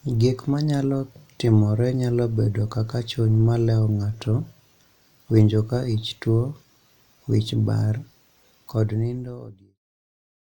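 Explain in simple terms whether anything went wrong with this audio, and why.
Nothing went wrong with this speech; the gentle fade-out that begins around 8.5 s and finishes at 9.81 s is just a smooth, deliberate ending.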